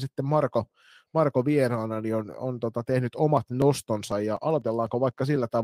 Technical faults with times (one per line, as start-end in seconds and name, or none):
3.37-5.36 periodic USB or driver dropouts